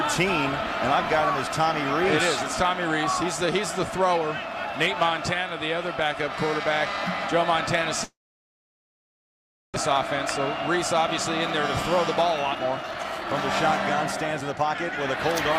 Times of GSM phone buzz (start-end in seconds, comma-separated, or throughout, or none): none